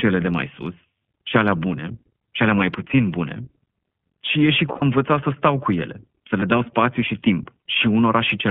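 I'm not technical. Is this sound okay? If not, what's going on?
No. The iLBC codec, an internet-phone coding, is used throughout. It keeps only a narrow band of the voice, up to about 3.4 kHz, and codes it in 20 ms chunks, so the speech sounds thin and slightly rough. There are lost iLBC frames at 4.72–4.83 s and 6.40–6.44 s. When chunks went missing, the decoder filled each gap by repeating the last bit of voice, which briefly sounds like a held, buzzy vowel.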